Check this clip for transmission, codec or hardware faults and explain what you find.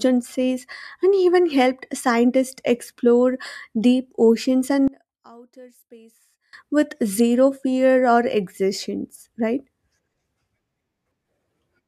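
One fault is present. From 4.88 to 6.53 s the speech drops by about 26 dB to a faint residue, likely one channel inverted, so centred content cancels when summed to mono.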